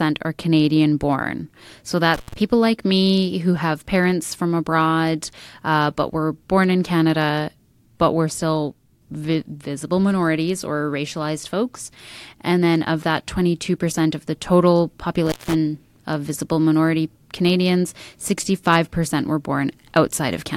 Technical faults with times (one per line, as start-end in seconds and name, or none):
2.14-2.33 intermittent contact
15.26-15.54 intermittent contact